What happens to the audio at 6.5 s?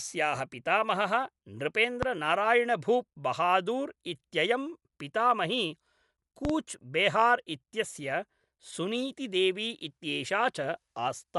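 A loud pop hits from 6.45 to 6.53 s, just before "बेहार् इत्यस्य सुनीति देवी". It is two sharp pops in quick succession, about 10 dB above the speech, which carries on underneath. The likely cause is a sudden voltage step, from a switch, static or a driver glitch, shaped by the circuits after it.

Dolby Digital compression also runs through this moment. It sounds dull, with nothing above 11.4 kHz, and there is rough, fluttering noise around tonal parts. With too few bits, the encoder narrowed the band and left many frequency lines to be filled with dither noise, which likely fits a bitrate of about 64 kbps.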